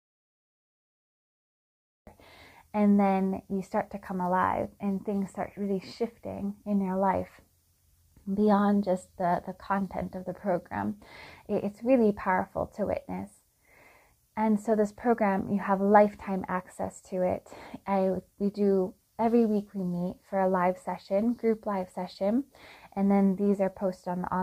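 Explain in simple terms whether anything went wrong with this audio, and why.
An audio dropout to silence runs from the very start of the clip until 2.07 seconds. For those first two seconds there is nothing at all, not even the faint background hiss a room normally leaves, and then the sound begins abruptly. The likely cause is that the input was lost, through something like a loose connection, a failed link or an accidental mute, while the recorder kept writing pure silence. Whatever happened during that stretch was never captured.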